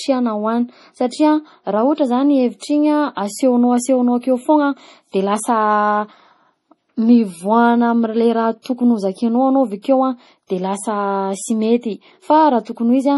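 A watery, swirling texture runs through the whole recording, with metallic chirping on s sounds and nothing above 11.5 kHz. That points to heavy MP3 compression, likely at a bitrate around 32 kbps, where the encoder drops the treble and lets weak frequency lines flicker on and off.

From 8.62 to 8.65 s, between "mivoagna am'le raha" and "tokony hozakainao anao avakeo", a hiss of about 35 ms arrives just ahead of an attack, which sounds softened. This is pre-echo: the codec spread its block's quantisation noise into the quiet moment before the onset.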